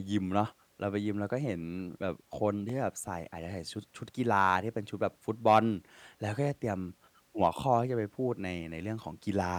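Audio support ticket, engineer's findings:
Block of digital silence at 0.48 s and 2.69 s. Each is heard as a tick or dip in the speech. Each hole lasts about 0.67 ms, which fits a 32-sample block. Probable cause: the output buffer was not filled in time, so zeros were sent. The sound cuts out and back with no fade.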